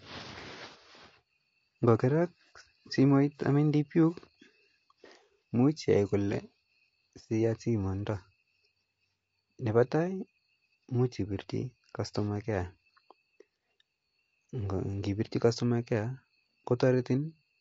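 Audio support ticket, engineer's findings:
Speech rough and grainy throughout, plainly audible. Likely low-delay AAC compression (AAC-ELD-type, consistent with about 32 kbps): short frames smear harmonics. Spectrogram: blurred harmonic lines, noise filling gaps between them, thin or synthetic-looking top band.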